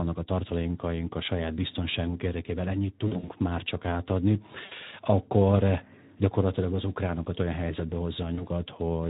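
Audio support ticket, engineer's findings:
Speex codec, whole clip: speech hoarse and noisy throughout. Fits a Speex setting near 11 kbps. Constant damage, unlike packet loss, which is confined to short bursts.

VoIP packet loss concealed by the speech codec, 3.07–3.32 s: after "saját biztonságunk érdekében ennyit", before "már csak átadni". Speech smears into a fading, stretched sound in several short breaks. Points to about 120 ms lost across 200 ms.

Same, 4.65–4.74 s: before "akkor gyakorlatilag az ukránokat". Stretched sound fading out. Consistent with about 60 ms lost.

Same, 8.35–8.47 s: after "az ukránokat olyan helyzetbe". Brief smear, fits one 20 ms frame. Weak, distorted recovery lasts beyond the gap.

Mechanism: decoder extrapolates last pitch and filter with falling gain. Buzz and slow recovery, rather than clean silence, set it apart from plain dropouts.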